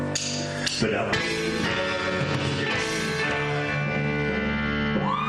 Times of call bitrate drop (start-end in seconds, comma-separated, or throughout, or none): 0.59-1.69